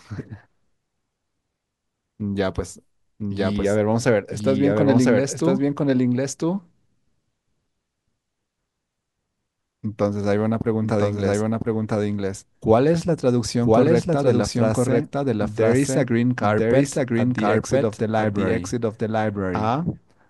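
Throughout, a doubled audio track lays a second full-band copy of the speech about a second behind at roughly equal level, likely from a slower capture path, with no decay or room colour, unlike an echo.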